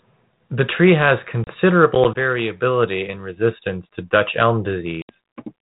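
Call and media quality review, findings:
Packet loss on an ADPCM call. A few packets were dropped at 1.44 s, between "tree has" and "variability in resistance to", a 30 ms gap. Several more were dropped at 5.02 s, a 70 ms gap. Both gaps are hard-edged silence. After each one the decoder's predictor and step size no longer match the sender's, so the speech comes back with brief distortion that settles within tens of milliseconds.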